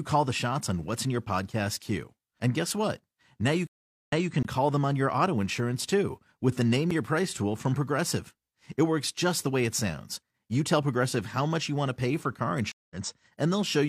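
Stream reconnects at 3.67 to 4.32 s and 12.72 to 12.96 s interrupt this speech recording. Each time the connection dropped, playback went silent, and a fresh decoder picked the stream up mid-flow. The first gap is about 0.41 s of silence, and the audio resumes 0.23 s earlier than where it stopped, so a short stretch repeats before "call them on your". The second, just after "pay for car", is about 0.19 s of silence and resumes roughly a tenth of a second later, skipping a sliver of audio. Blocks of digital silence occur at 4.43 to 4.45 s, a 21.3 ms hole just before "call them on your", and at 6.91 s, a 6.4 ms dropout. In each, samples were replaced by zeros with no fade, so the sound cuts out and back abruptly. The first gap's length fits a 1024-sample output buffer that wasn't filled in time. The shorter one registers as a tick.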